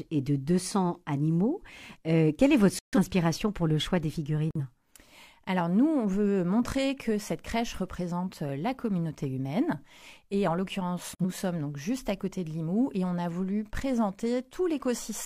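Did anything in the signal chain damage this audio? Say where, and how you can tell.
Yes, at the decoding stage: the sound drops abruptly into dead silence three times, at 2.79 to 2.98 s, 4.51 to 4.61 s and 11.16 to 11.22 s, then resumes exactly on time. These are corrupt frames being muted. Bit errors in the compressed stream made the decoder reject whole frames, and the player substituted silence. The gap lengths fit three, two and one lost frames respectively, and the timeline stays intact.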